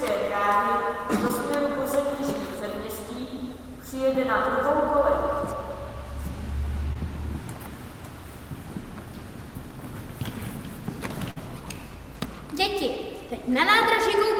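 Short concealed packet loss at 1.27–1.31 s and 6.93–6.97 s: about 20 ms never arrived, so the receiver extended the preceding sound, leaving a brief smear. A burst of packet loss at 11.31–11.38 s bridges roughly 50 ms with a fading continuation, then resumes with about 40 ms of audio missing.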